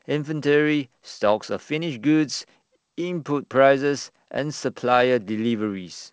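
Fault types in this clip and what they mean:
Nothing here counts as a fault: the speech comes through G.722 wideband telephone coding at 64 kbit/s, which keeps it clear up to about 7 kHz, and whatever trace that coding leaves is faint at most.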